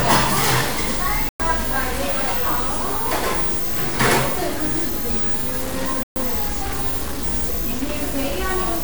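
Right from the start, the whole thing sounds coarse and grainy, with a gritty distortion that moves with the sound and quiet moments crumbling or sputtering. That's low bit depth without dither, likely truncated to something like 4-bit samples, leaving the error barely below the signal.

Then at 1.29 s the audio drops to silence for about 0.11 s and resumes at 1.40 s, and again at 6.03 s for 0.13 s until 6.16 s. Those gaps are likely Bluetooth stalls, where the headphone buffer ran dry waiting on resent packets.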